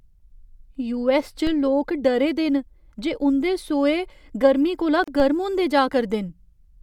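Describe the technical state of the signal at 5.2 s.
A low thump sounds at 5.20 s, just after "गर्म कोला", while the speech carries on unchanged. This is a DC step: the waveform's zero line jumps suddenly, and the offset then drains away slowly, as if through a high-pass filter near 5 Hz.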